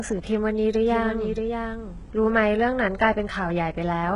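From the first moment to the end, the speech carries heavy damage that sounds like HE-AAC compression, likely at a very low bitrate, around 12 kbps. The treble is synthesised from lower bands by spectral band replication, so s sounds come out gritty and metallic. On a spectrogram, the upper region shows smeared, blocky patches whose harmonics fail to continue the lower ones, with nothing at all above 11 kHz.

From 0.84 s to 2.66 s a doubled audio track appears: a second full-band copy of the speech, roughly 0.7 s behind and about 5 dB quieter, with no added room sound, likely from the same audio being captured twice through paths of different delay. It sounds like a flat overlapping echo that switches on and off abruptly. The waveform shows the envelope repeated at that spacing, beginning and ending with hard edges.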